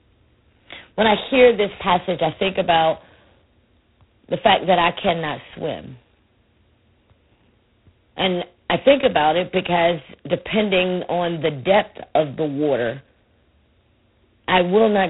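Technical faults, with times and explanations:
Throughout, G.726 ADPCM coding. A harsh, rasping hiss tracks the speech level. The damage is heavy, which fits the 16 kbit/s mode. Only two bits a sample code each difference from a prediction, so errors are coarse. Nothing passes above 3.9 kHz.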